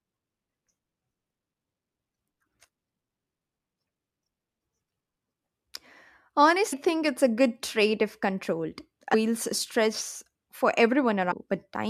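Damaged data in the compressed stream makes the decoder misread frames and lose sync, leaving brief chirps, clicks or short holes at 1.3, 4.22, 6.72, 9.13 and 11.31–11.33 s.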